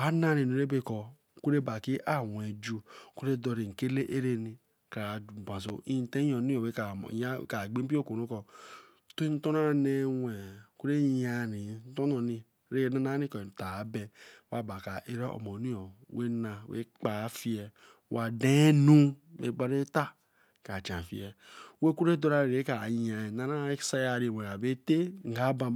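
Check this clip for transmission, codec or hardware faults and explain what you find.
One hardware-type fault stands out: a single loud pop from 5.69 to 5.72 s, right after "kra base". A sudden voltage step or pulse, likely from a plug, switch, static discharge or driver glitch, is added to the speech, which continues underneath. It sounds like a sharp thump standing roughly 10 dB above the speech. On the waveform it shows as a tall, narrow spike; on a spectrogram, a thin vertical stripe spanning the whole frequency range.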